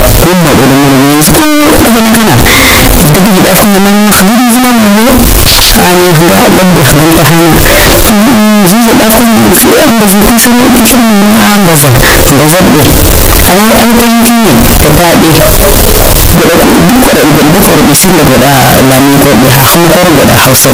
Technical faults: signed and unsigned mixed up

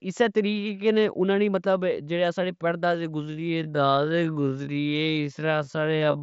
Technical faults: time-stretched section

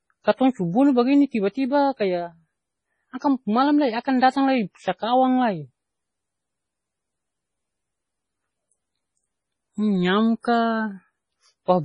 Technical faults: MP3 compression; pre-echo

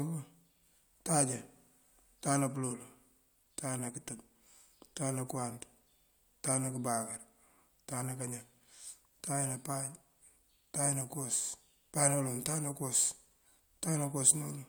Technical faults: none

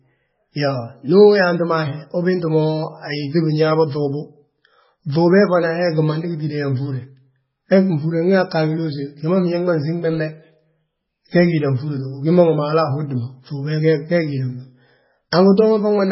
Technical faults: MP3 compression

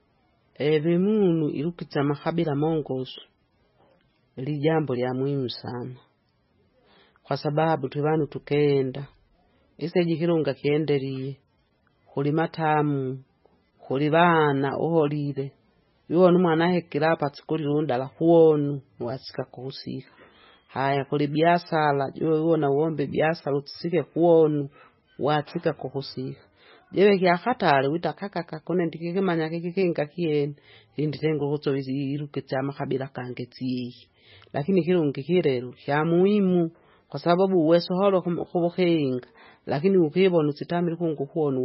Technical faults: MP3 compression

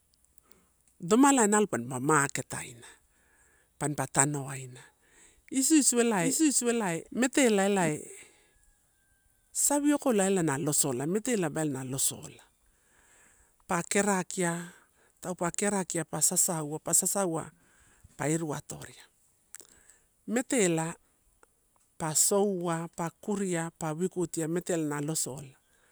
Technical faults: doubled audio track

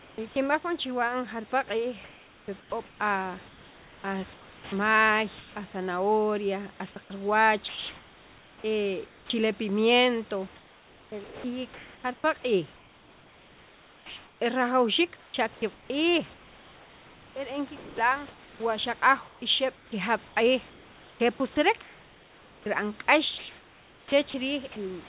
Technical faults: sound chopped by the voice detector; comfort noise in place of the background

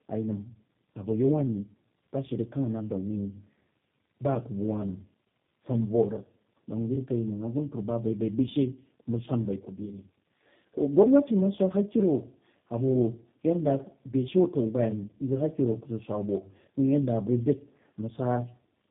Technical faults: tandem speech coding

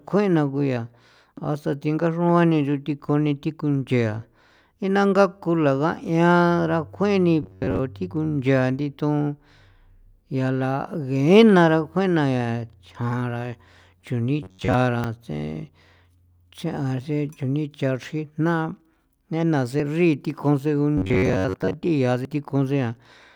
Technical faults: dropped buffer (overrun); robotic sound from repeated short buffers

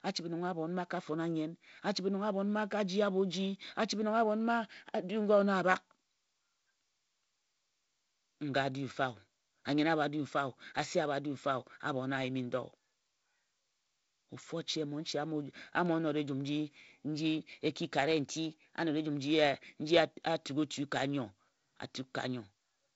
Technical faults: drift correction step

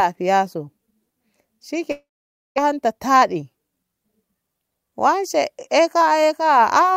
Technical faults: long network dropout

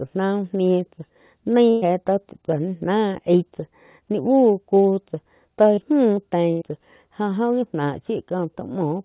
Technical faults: burst of packet loss; short concealed packet loss

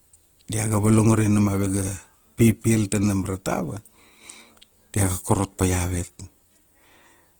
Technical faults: Opus compression

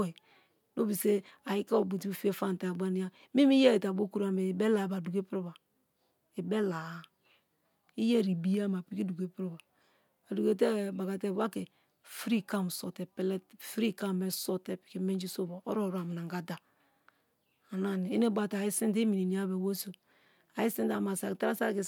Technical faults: none

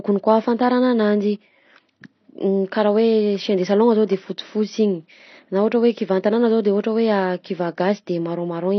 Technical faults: AAC compression

